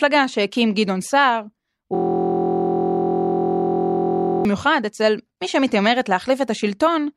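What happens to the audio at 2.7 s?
At 2.7 s the audio is a steady, flat buzz at about 43 Hz, part of a system hang loop running from 1.95 to 4.45 s. A 23.22 ms slice repeats exactly, over a hundred times, while the frozen system leaves the hardware cycling its ring buffer, which fits a 1024-sample buffer.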